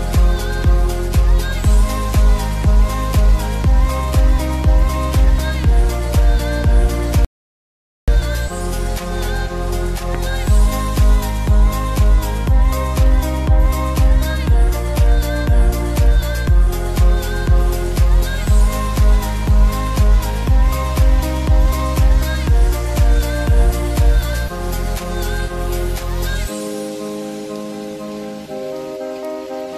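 At 7.25 s the audio drops into silence and stays there until 8.08 s, a rebuffering stall lasting about 0.83 s. The player used up the audio it had already downloaded and had to wait for more data before continuing. When playback resumes it picks up at exactly the point where it stopped, so none of the material is skipped. The only effect is that about 0.83 s of dead air is inserted into the timeline.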